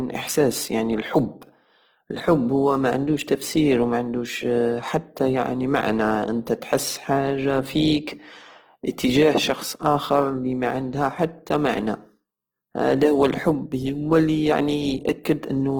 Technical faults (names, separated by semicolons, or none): Opus compression